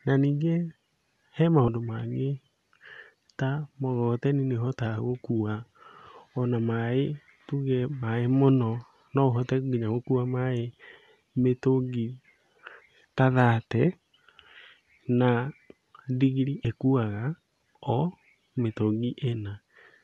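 Compressed frames were skipped at 1.67, 8.02 and 16.64 s, with the decoder dropping a whole frame (roughly two at 8.02 s), consistent with a frame of about 26 ms. The speech jumps ahead by about 30 ms, 50 ms and 30 ms, each join a short smeared blip.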